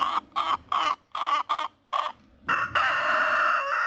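Between 0.83 and 1.93 s, packets kept arriving late, draining the jitter buffer eight times, producing repeated stalls (stutter). Each gap, up to 70 ms, was filled by stretching the preceding sound, about 200 ms in all, so nothing is lost but the audio drags and hiccups through a band limited to 8 kHz.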